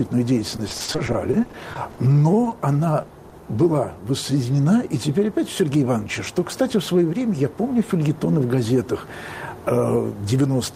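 Repeated packet loss (robotic sound) runs from 0.51 to 2.14 s. Audio keeps failing to arrive in time, with holes up to 40 ms long. Each hole is bridged by extending the previous sound, and about 22% of the stretch is patched this way, so it comes out choppy.

Short concealed packet loss then strikes five times, at 2.44–2.48, 2.50–2.54, 3.02–3.06, 3.08–3.12 and 3.30–3.34 s. Each time about 20 ms goes missing and is filled by continuing the preceding sound before blending back, leaving a brief smear or wobble.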